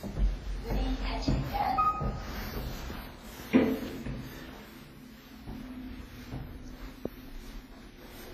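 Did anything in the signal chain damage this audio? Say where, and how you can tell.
Yes, at the codec stage, and throughout the clip. The sounds carry a ringing, washy smear with hiss that swells and fades with the signal, and nothing remains above 15.2 kHz. This is likely WMA compression with heavy damage, consistent with a low bitrate around 24 kbps. Long transform blocks spread quantisation noise over tens of milliseconds, and weak spectral lines are zeroed. Network packet loss would cause gaps, and a plain low-pass filter would leave no breathing hiss.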